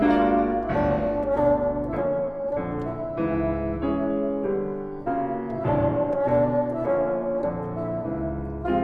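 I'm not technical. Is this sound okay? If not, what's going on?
No. From the start to about 2.0 s there's mains hum, a steady, fairly noticeable low 50 Hz buzz leaking in from the power supply wiring.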